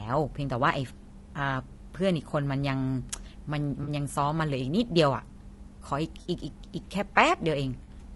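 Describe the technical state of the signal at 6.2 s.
Right at 6.21 to 6.27 s there's an AAC frame loss with concealment. Around 40 ms of coded audio, which fits a couple of dropped frames, went missing, and the decoder patched the hole from the last good spectrum. So you get a brief smeared, noisy, phasey blip rather than a clean gap.

Underneath that, the whole stretch has that rough, grainy quality with noise creeping between the harmonics and a thin, somewhat synthetic top end. That's likely low-delay AAC compression, AAC-ELD, at a rate that sounds like roughly 32 kbps. At that rate there just aren't enough bits to code the voice's harmonics cleanly.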